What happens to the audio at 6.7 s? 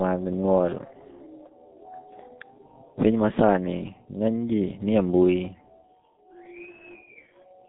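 At 6.7 s the speech carries the same G.723.1 codec damage heard across the whole clip. The coder rebuilds each 30 ms frame from a compact vocal-tract model that updates slowly, so consonants smear and the tone turns hoarse. The line band runs from about 150 Hz to 3.6 kHz, with nothing above 3.8 kHz, which makes the sound muffled. The heavy degradation fits a bitrate of about 6.3 kbit/s.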